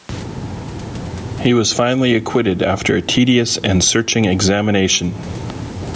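Throughout the speech, the level ducks under every loud syllable, swinging by something like 15 dB and squashing loud and quiet passages together. This is gain pumping, likely from excessive input gain with a fast limiter clamping each peak.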